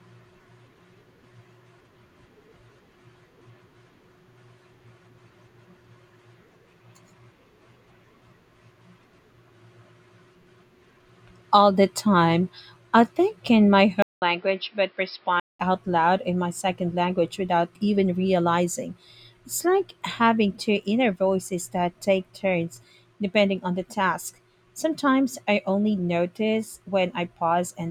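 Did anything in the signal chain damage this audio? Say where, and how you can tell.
Yes. Overlapping chunks at the buffer or processing stage leave a brief stutter at 2.74, 7.74, 12.75, 17.76 s (after "my second language without") and 22.77 s (after "inner voices that take"). Each join replays about 7 ms, every 5 s. Unlike a dropout, nothing is lost; a sliver repeats on a fixed grid.

At the input stage, just after "I think in my" at 14.02 s, the audio goes silent for about 0.2 s and returns duller, with nothing above 5.4 kHz. It is roughly 5 dB quieter and has a new noise floor about 40 dB down. It clears again by 15.60 s, before "out loud in my". The likely cause is an input switched to a poorer device. A codec narrowing its bandwidth would not bring a gap, a level shift and different noise all at once.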